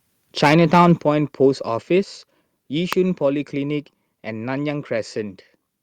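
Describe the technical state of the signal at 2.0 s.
Right around 2.04 s there's a microphone volume stepped down moment: the whole speech signal, background included, drops by about 3 dB in a single step. That's most likely the call software deciding the input was running hot and pulling the device's input volume down.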